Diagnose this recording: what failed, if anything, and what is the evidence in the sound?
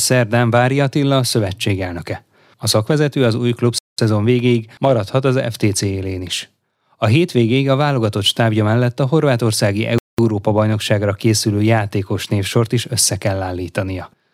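The speech breaks at the chunk joins in storage or playback: a gap between chunks of silence lasting 200 ms at 3.78 s, after "szakvezető az új", and again at 9.98 s, after "stábja mellett a horvátországi". Nothing's missing; each 6-second block just starts late, leaving a hard-edged hole.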